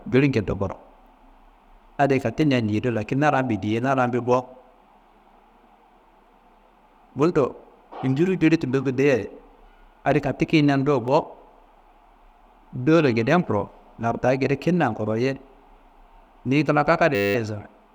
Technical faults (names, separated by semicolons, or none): clock drift buffer slips; system hang loop